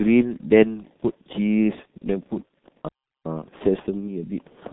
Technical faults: G.723.1 codec; playback stall

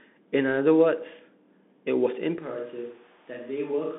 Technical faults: Bluetooth CVSD headset codec; switch to a distant microphone

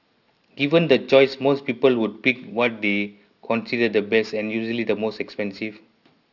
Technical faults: aliasing

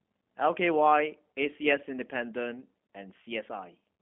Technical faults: G.729 codec

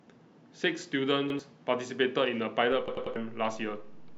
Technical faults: repeated buffer; DC step

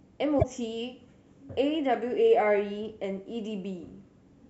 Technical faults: damaged data in a compressed stream

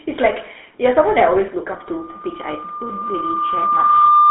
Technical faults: GSM full-rate codec; loudspeaker feedback squeal

